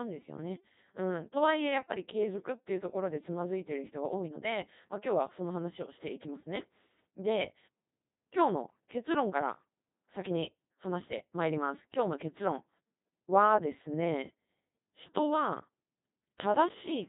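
Codec 2 vocoder damage runs throughout: the speech is rebuilt from sine waves using only pitch, voicing, energy and spectral envelope, leaving it heavily robotic and buzzy, consistent with roughly 2.4 kbit/s, with nothing above 3.8 kHz.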